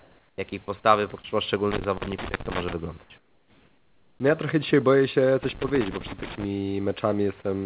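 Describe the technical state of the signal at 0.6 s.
Right around 0.6 s the speech gets chopped twice: a brief gap at 0.5 s, then another from 0.64 to 0.68 s. Each time, the sound gives way to steady noise or near silence for a moment before it picks back up. That pattern points to sound dropped by the voice detector, which likely mistook part of the sound for background, stopped sending, and left the receiver to fill the gap with comfort noise inside the 4 kHz telephone band.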